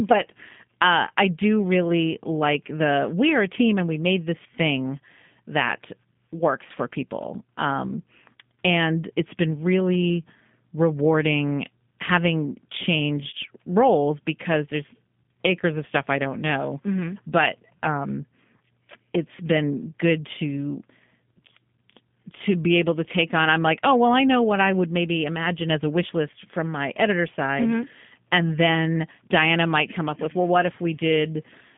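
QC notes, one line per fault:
Throughout, G.729 codec: the speech sounds plainly rough and synthetic because a coder has rebuilt it from a vocal tract filter and a few pulses, which fits an 8 kbit/s G.729A link. It's squeezed to about 150 Hz to 3.5 kHz, with nothing above 4 kHz.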